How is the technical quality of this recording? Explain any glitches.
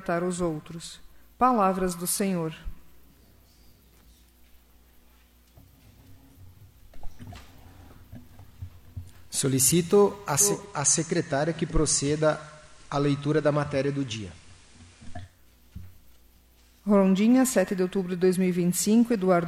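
The recording has one clear glitch. From 10.36 to 15.43 s, faint hiss appears and level drops about 2 dB. This is digital radio blending to analogue FM, cross-fading over 311 ms each way.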